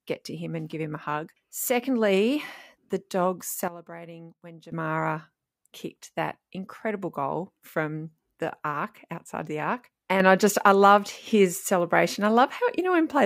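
At 3.68 s the speech and its background noise drop together by about 14 dB, recovering at 4.72 s. From 10.2 s to the end, both rise by about 6 dB. These sudden gain jumps were likely caused by digital gain settings applied instantly, without a ramp.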